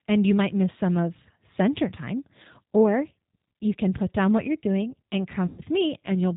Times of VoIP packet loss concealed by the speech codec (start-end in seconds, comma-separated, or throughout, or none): 5.46-5.61